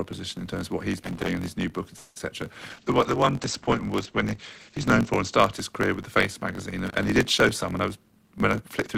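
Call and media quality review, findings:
Constant low buzz at about 46 Hz, and speech running about 1.07x fast at normal pitch. Block size mismatch (truncated): the writer's blocks, consistent with 1024 samples, are longer than the reader's, so each block's tail is discarded.

Irregular crackle and scratching at 1.04–1.28 s and again at 6.87–7.04 s, just before "he did". Loose connector crackle: an intermittent contact chops the signal.

Fading buzz hold for about 0.21 s at 1.96–2.17 s, then speech resumes with nothing lost. Call audio freeze, likely a jitter buffer underrun from delayed packets; it inserts a gap into the stream.

Brief smear at 2.19 s. Short concealed packet loss: about 10 ms never reached the decoder, and the receiver filled it by continuing the preceding sound.

Rough, muffled speech from 2.70 to 5.58 s, ending before "his career with the". Call bitrate drop from 32 to 14 kbps, with bandwidth cut from 20 kHz to 8 kHz.

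Hurried delivery at unchanged pitch from 7.44 to 8.96 s, after "he did", at about 111% speed. Jitter buffer speed-up: the receiver trimmed pitch-period fragments, roughly a fifth of a second in total, to shed excess delay.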